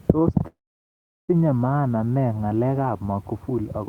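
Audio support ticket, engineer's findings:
Call audio freeze, 0.47–1.31 s: brief buzz decaying to about 0.75 s of silence, then resumes intact with nothing lost. Likely jitter buffer underrun from held-up packets; adds 0.81 s delay.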